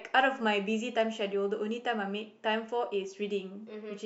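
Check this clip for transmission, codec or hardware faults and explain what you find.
Nothing wrong can be heard anywhere in this speech.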